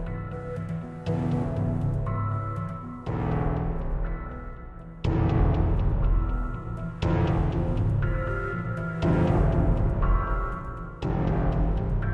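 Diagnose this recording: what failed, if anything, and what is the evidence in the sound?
Nothing in the signal chain has failed: the sounds in the recording arrive intact, with no dropouts, discontinuities, clipping or other defects that would point to trouble at any stage from capture to playback.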